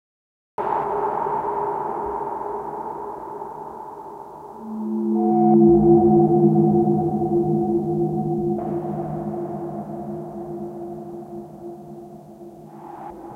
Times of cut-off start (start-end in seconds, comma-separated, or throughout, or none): 0.00-0.58